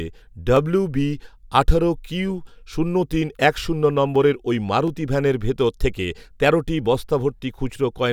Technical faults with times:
0.57-7.75 clock drift buffer slips

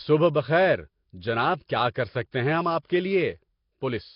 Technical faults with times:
0.00-4.15 Nellymoser compression
1.94 pre-echo
2.31 pre-echo
2.82-2.85 pre-echo

